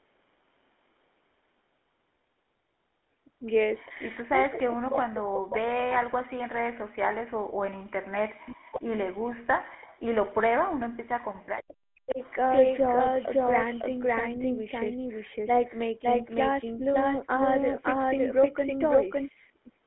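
GSM full-rate codec, throughout the clip: the speech has been squeezed through the original GSM vocal-tract model, which rebuilds the voice from a sparse train of excitation pulses at a rate that fits 13 kbps. The line band runs roughly 250 Hz to 3.5 kHz, and nothing above 3.9 kHz survives. The result is plainly audible: a buzzy, gravelly grain on every syllable and a dull, boxy tone. The call's microphone high-pass is also present, thinning only the deepest bass.

Speech suppressed in double talk, from 4.3 s to 12.21 s: across about 7 seconds of this stretch the voice sags, loses its top end and breaks into pieces, at worst dropping by around 40 dB. This is likely an echo canceller that could not tell this talker apart from loudspeaker echo while both sides spoke at once. It clamped down on everything, so the speech fades and chops rather than staying steady.

Echo leak, at 4.53 to 5.99 s, 8.71 to 9.28 s and 12.10 to 12.15 s: a delayed copy of the speech trails the original by 474 ms, then 497 ms, then 515 ms. 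This is likely a loudspeaker on one side whose canceller let part of its microphone pickup return down the line. The first return is fairly strong, about 10 dB below the speech. The second is faint, about 25 dB down, and the last is a brief scrap about 20 dB down.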